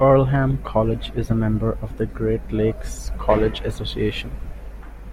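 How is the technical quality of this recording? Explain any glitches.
Nothing stood out on listening, so there are no glitches to explain in this recording.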